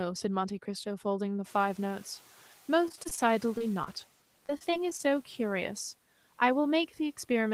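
From 1.44 to 4.06 s, the room noise jumps by about 19 dB near 1.5 s, and the noise suppressor is catching up. Its noise estimate takes about 2.5 s to adapt, so the noise comes through first and then sinks by about 7 dB. A spectrogram shows a noise floor that appears suddenly and fades gradually.

From 2.85 to 3.19 s, repeated packet loss gives a choppy, robotic sound. Seven short gaps, the longest 21 ms, are each patched by continuing the last sound. A spectrogram shows these as a row of smeared, repeated frames.

At 3.58 to 3.62 s and again at 3.84 to 3.88 s, a short concealed packet loss leaves about 20 ms missing each time. The receiver fills each hole by extending the previous sound, which is heard as a brief smear and seen as a thin blurred vertical slice.

From 4.46 to 5.11 s, repeated packet loss returns as five gaps up to 26 ms long, bringing back the robotic choppiness. The waveform shows repeated copies where the real audio is missing.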